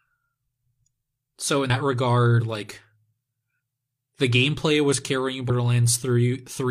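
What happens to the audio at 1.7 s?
Audio missing between chunks occurs at 1.70 s. The speech jumps abruptly forward, with roughly a tenth of a second gone and the two sides joined without any gap. The likely cause is a recorder or processor handling 2-second chunks and losing material at the changeover.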